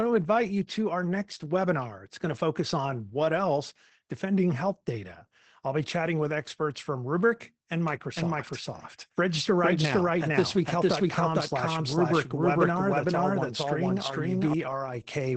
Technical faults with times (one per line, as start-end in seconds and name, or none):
0.00-15.37 Opus voice compression
7.88-14.54 doubled audio track